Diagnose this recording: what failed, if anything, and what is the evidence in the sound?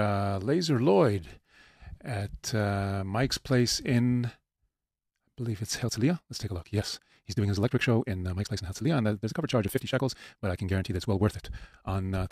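From 5.80 s to the end, the speech suddenly races at about 1.88 times its pace yet keeps its pitch, sounding rushed: a time-stretched section, likely software dropping short pieces to fit a length.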